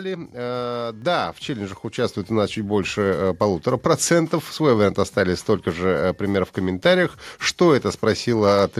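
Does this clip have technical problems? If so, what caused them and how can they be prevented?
Yes: microphone volume stepped up at 1.02 s, before "в челленджах", by about 5 dB, and at 2.04 s, before "у нас чуть больше", by about 3 dB. Automatic gain control raised the device input volume in single steps, lifting speech and background together. Disabling automatic microphone adjustment in the call software prevents it.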